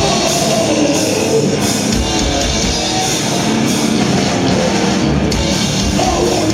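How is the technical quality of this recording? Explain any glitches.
No technical glitches can be heard in this recording.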